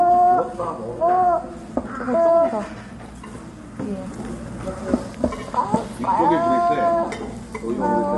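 Low-delay AAC compression runs throughout these sounds: plainly grainy, rough texture with nothing above 11.5 kHz, likely from AAC-ELD's short frames at a low bitrate around 32 kbps.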